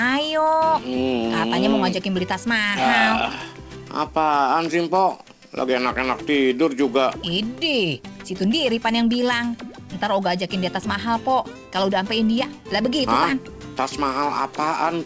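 No faults are present; the audio carries the band limit of a call path, with nothing above 8 kHz, which fits a wideband codec such as G.722.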